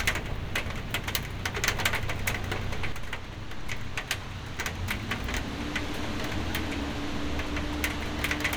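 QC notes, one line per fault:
2.92–8.56 s, sudden gain jump: at 2.92 s the level of the sound drops by about 6 dB in a single step and stays there to the end of the clip. The background noise falls by the same amount at the same instant, so the change sits in the signal chain rather than in the source. The drop is immediate, with no fade, which likely points to a gain setting or a one-bit shift applied without a ramp.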